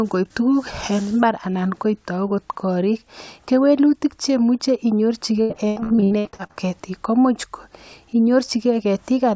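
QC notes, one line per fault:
5.42–6.58 s, repeated packet loss (robotic sound): about a dozen dropouts, longest 83 ms, each patched by extending the last sound, so roughly half the span is filled in and sounds choppy. The spectrogram shows smeared, repeated frames, and the waveform shows looped, flattened blocks.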